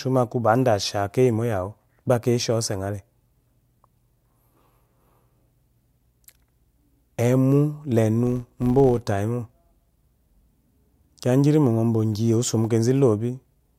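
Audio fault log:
8.27 to 9.07 s, filter restarted on every block: Just after "emu lenu", a buzz at 100 Hz rides on the speech. Some filter loses its memory between blocks of samples. Each block then starts from silence, so every boundary leaves a small transient. These ticks arrive 100 times a second, which fits blocks about 10 ms long, and they fuse into a steady buzz. The buzz grows and shrinks with the speech level, because each restart jump scales with the signal.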